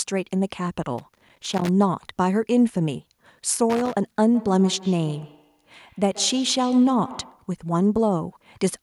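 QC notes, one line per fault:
0.98–1.69 s and 3.70–3.96 s: loose connector crackle. Two irregular bursts of scratchy crackle, the first lasting about 0.7 s and the second about 0.26 s. A worn or dirty contact in the signal path is making and breaking as it shifts, so the audio is chopped on and off in rapid, uneven fragments, and any DC offset present on the line turns each break into a pop.
4.35–7.52 s: feedback echo between two devices. The speech returns as a delayed copy roughly every 150 ms, peaking at about 17 dB below the direct speech. A second device in the same room is playing the call back out loud, and this microphone picks that playback up again. Each echo canceller only removes what its own device plays, so the returned sound passes through as a fixed-interval repeat.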